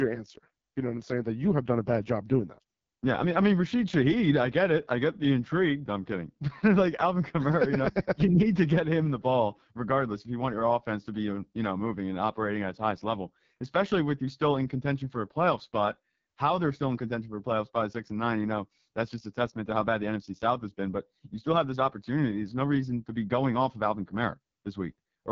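Throughout, the speech carries AMR wideband (HD Voice) codec damage: a rough, raspy buzz from a vocal tract model starved of pulses, which fits the 6.6 kbit/s mode. Nothing sounds above 7.5 kHz, and unlike narrowband telephone audio the band reaches well past 3.4 kHz.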